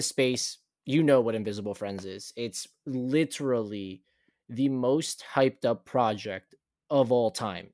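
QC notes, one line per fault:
No faults heard.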